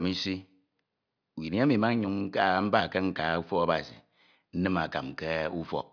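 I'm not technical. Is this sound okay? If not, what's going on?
Yes, no technical faults are audible anywhere in this speech recording, so nothing needs fixing.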